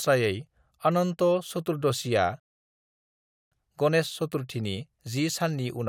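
At 2.40 s the speech stops dead and goes silent until 3.52 s. This is a rebuffering stall. The player ran out of downloaded audio and waited for more. When sound returns, it picks up exactly where it stopped. Nothing is skipped, but about 1.1 seconds is added.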